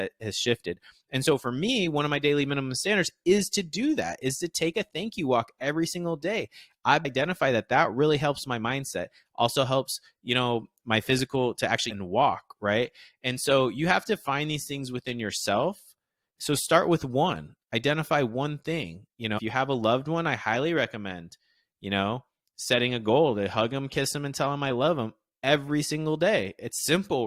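Three brief glitches break into this speech recording: one at 7.04 s, after "every single day I've"; one from 11.89 to 11.91 s, after "my physical to actually"; and one from 19.37 to 19.39 s, just before "you have a loved". Each blip is about 20 ms or less. The cause is damaged data in a compressed stream. Corrupted bytes make the decoder misread frames and lose sync until it finds the next valid header.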